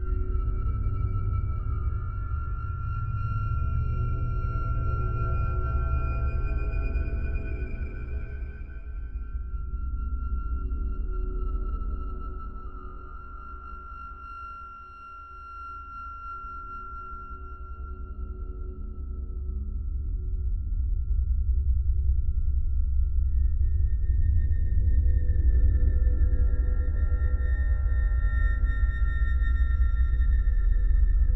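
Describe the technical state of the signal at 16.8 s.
No fault is audible at 16.8 s; the signal there plays through intact, with no dropout, click, distortion or other defect at that moment.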